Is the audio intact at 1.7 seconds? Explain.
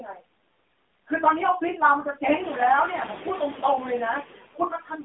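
No. Noise suppressor artifacts run through the whole clip, including 1.7 s. The suppressor pulls down each frequency band it judges to be steady noise, frame by frame, by about 18 dB, so the noise sinks between the words and rises under them.

AMR narrowband mobile codec damage is also present throughout. The sound is confined to roughly 200 Hz to 3.6 kHz, and a vocal-tract model driven by sparse pulses rebuilds it. The plainly buzzy, synthetic quality fits a low bitrate near 7.4 kbps.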